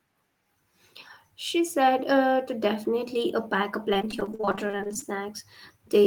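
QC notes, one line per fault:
3.93–5.13 s repeated packet loss (robotic sound): over twenty gaps up to 41 ms, each patched by repeating prior sound, giving sustained choppy robotic texture, not one dropout.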